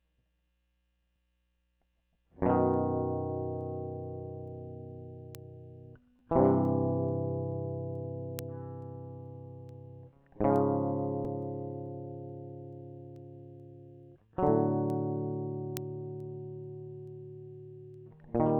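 From 0.13 s to 18.38 s, word clock ticks land about every 0.4 s across the music: the receiver's clock is roughly 50 ppm off the sender's, so a sample slips each time.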